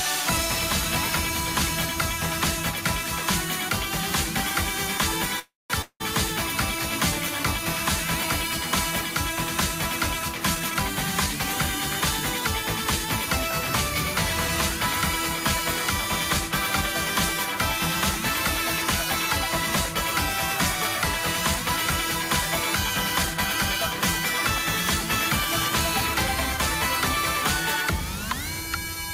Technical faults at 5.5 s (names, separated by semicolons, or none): call audio freeze